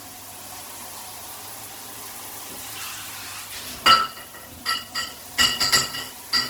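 Throughout, the sound is grainy and rough, with tones turned noisy. This is likely Opus compression in its music mode, at a low rate near 16 kbps, filling starved bands with folded or noise content.

From 1.25 s to 3.15 s, a drift correction step likely occurs. Playback runs 6.2% fast, raising pitch 104 cents, about a semitone, before snapping back.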